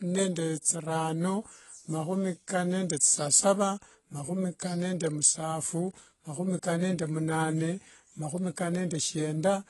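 Throughout the speech, nothing sounds above 11.5 kHz, and the damage is plainly audible: dull, smeared sibilants with a fizzy, warbling texture. That points to AAC compression, likely AAC-LC at a low bitrate near 32 kbps. A plain low-pass filter would dull the sound without this warble.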